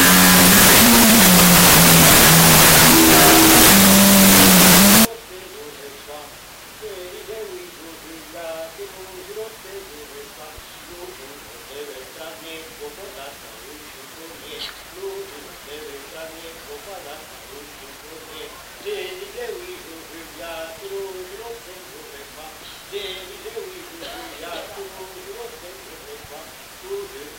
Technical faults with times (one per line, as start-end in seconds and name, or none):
0.00-5.05 wrong sample width